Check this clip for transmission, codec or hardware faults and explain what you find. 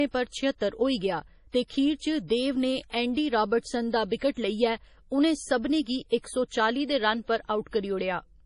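Yes, one codec fault runs through the whole clip. Throughout, the speech sounds watery and swirly, with nothing above 10.6 kHz. This is likely heavy MP3 compression, consistent with about 32 kbps, which zeroes weak frequency lines and cuts the treble.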